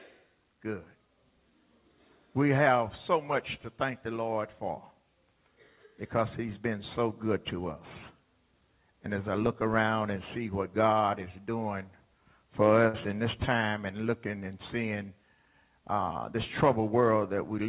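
The audio passes through a telephone-grade call path with nothing above 4 kHz, consistent with G.711 A-law. At 12.88 to 12.95 s, one sound is briefly held, stretched about 54 ms with a slight buzz or dip: a short stall from a late packet that emptied the jitter buffer.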